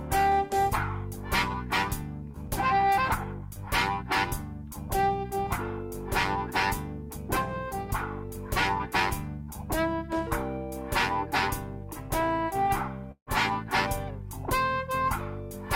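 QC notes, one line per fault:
2.31–2.36 s, short concealed packet loss: around 20 ms of audio failed to arrive in time, and the decoder patched the gap with about 21 ms of synthesised continuation before easing back into the real signal. The patch extends whatever sound was playing, repeating its periodic shape or substituting shaped noise, so the moment comes across as a tiny smear or wobble, and any very brief sound falling inside the gap can disappear.
13.12–13.29 s, long network dropout: about 0.16 s of audio is gone. The sound first carries on as an artificial continuation for roughly 150 ms, a buzz or hiss that fades as the concealment runs out of material to extend, and then about 80 ms of silence remains before the real signal resumes further along, with the missing section never played. The likely cause is a longer interruption in delivery than the receiver's concealment can cover.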